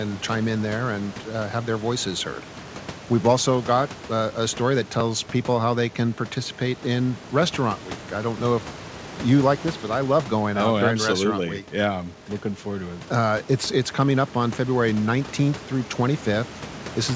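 Nothing goes wrong here at all: the room's background noise sits about 19 dB under the speech, and the top end stops at 8 kHz, which is just what a wideband call codec sounds like.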